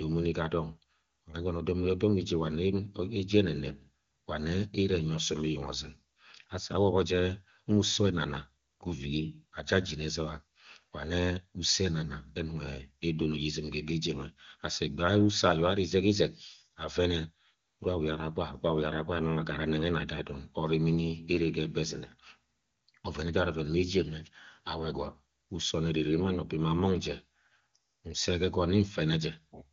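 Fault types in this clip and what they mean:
No technical fault can be heard in this speech clip. It has the band-limited sound of a wideband HD Voice call, and the clear, natural detail points to the AMR-WB codec running at its top rate of about 24 kbit/s.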